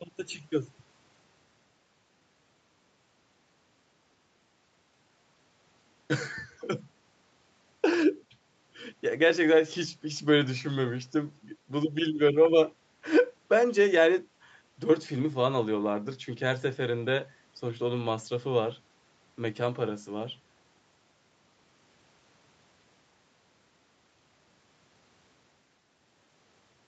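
A speech recording with no technical faults to report. The call path can be heard in the band limit, with nothing above about 8 kHz.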